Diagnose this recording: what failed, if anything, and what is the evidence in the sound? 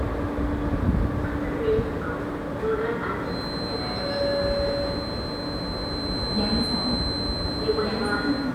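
Feedback whistle from 3.21 s to the end: a thin, steady tone near 4.1 kHz sits roughly 10 dB below the sound, swelling and fading slowly in level. The likely cause is an acoustic loop from loudspeaker back into the microphone, held just at the feedback threshold.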